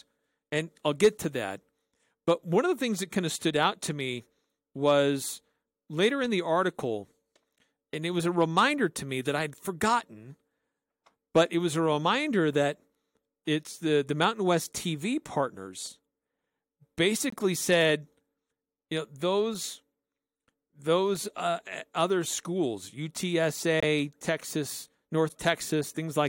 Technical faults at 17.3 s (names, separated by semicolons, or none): corrupt frame muted